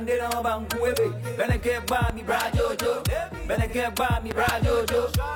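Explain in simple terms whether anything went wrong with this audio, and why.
Two brief blurry spots interrupt the audio, at 1.33 to 1.39 seconds and again at 3.68 to 3.74 seconds. For a moment the sound turns smeared and noisy, as if it went out of focus, then it snaps back. This is AAC frame loss with concealment. The audio was stored in small compressed chunks, and a piece about 43 milliseconds long, which fits a single lost chunk, went missing each time. The player guessed what belonged there by reusing the sound just before the gap, and that guess is the smear you hear.

There is also a loud pop at 2.10 to 2.13 seconds, a single sharp click that jumps out well above the sound, which keeps going underneath it. From 4.31 to 4.51 seconds come two more pops close together, a little less forceful. The likely cause is a sudden electrical jolt getting into the signal, such as from a plug being moved, a switch being flipped, a spark of static or a brief glitch in the equipment.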